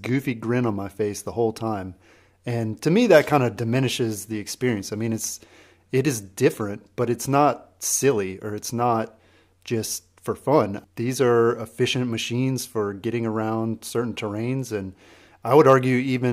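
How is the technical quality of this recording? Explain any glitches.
No audible glitches or faults.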